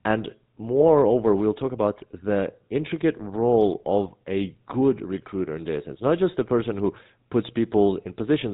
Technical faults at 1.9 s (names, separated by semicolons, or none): GSM full-rate codec